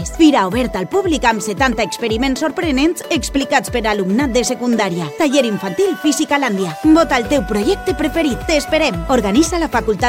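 A steady USB whine runs under the sound for the whole clip, fixed at 1 kHz, the rate of USB's 1 ms frames leaking in through power or ground. It sits roughly 35 dB below the signal. On a spectrogram it is an unbroken horizontal line at 1 kHz.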